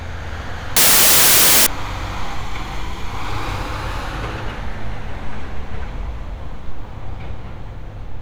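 From 0.77 to 1.67 s the audio turns into a harsh blast of loud broadband noise. That's samples built from the wrong bytes: the reader misassembled each sample, so the jittery low bits became the big part of the values, and nearly 0.9 s comes out as noise.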